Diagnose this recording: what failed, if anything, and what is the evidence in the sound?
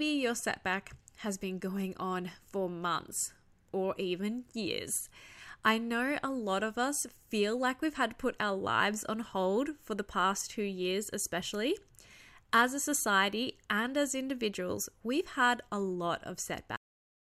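The failure is a cut-off end at the storage or buffer stage. Right after "had a lot of", at 16.76 s, the speech stops mid-sound and drops straight to digital silence with no decay. The final buffers were apparently never written, so the recording just ends there.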